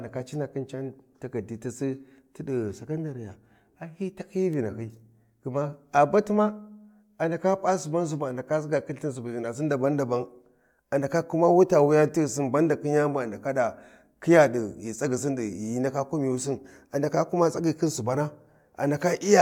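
No technical faults can be heard anywhere in the recording, and the speech signal stays steady and intact for its whole duration.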